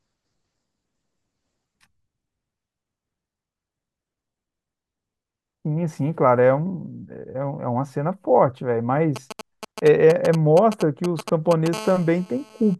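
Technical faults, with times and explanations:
9.16–11.68 s, GSM signalling bursts: a 2G phone close by sends short groups of radio bursts while signalling, and the audio circuit rectifies them into a galloping dit-dit-dit of brief 217 Hz buzzes, about 10 dB below the speech. Unlike a call buzz, it stops and starts in clusters.
11.73–12.75 s, GSM phone buzz: the phone is now in a call, transmitting continuously at 217 bursts per second. Rectified, this becomes a hard, raspy, harmonic-rich 217 Hz buzz about 18 dB below the speech. Unlike the earlier bursts, it holds steady and does not follow the speech.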